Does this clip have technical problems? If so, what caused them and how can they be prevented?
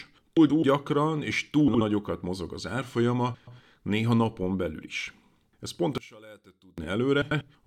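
Yes. Frames out of order occur at 0.37 to 0.63 s, 1.68 to 1.81 s (just before "mozog az"), 3.34 to 3.60 s (just before "néha napon belül is") and 7.22 to 7.41 s. In each, two neighbouring blocks of 128, 64, 128 and 96 ms swapped places, so the speech stutters while keeping its length. A spectrogram shows abrupt vertical seams where harmonic contours jump. Sequence-numbered packets with a reorder buffer before decoding prevent it.

From 5.98 to 6.78 s the speech drops by about 24 dB, leaving a faint residue. This is likely one channel inverted, with the mono sum cancelling the centred voice. The waveform envelope collapses to a sliver. Checking polarity with a correlation meter before mixing down to mono prevents it.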